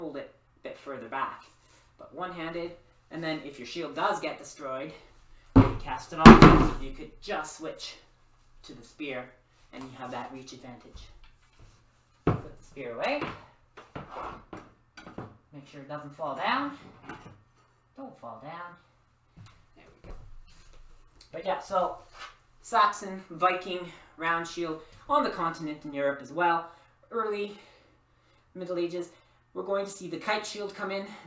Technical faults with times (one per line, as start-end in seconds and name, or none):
none